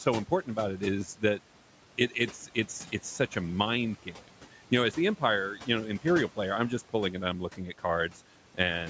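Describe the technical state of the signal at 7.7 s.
At 7.7 s the speech is cut by the noise suppressor, between 7.53 and 7.84 s, just after "just pulling and I'm". The suppressor mistook quiet speech for background and pulled it down by about 12 dB, for roughly a tenth of a second in total. Soft sounds come out swallowed and faint rather than fully silent, which separates this from a packet-loss dropout, where the signal breaks off abruptly or is patched over.

The same moment carries noise suppressor artifacts, which run through the whole clip. The suppressor lowers bands it judges to be steady noise by about 12 dB, frame by frame. The residue rises and falls with the speech rather than holding steady, unlike constant room hiss.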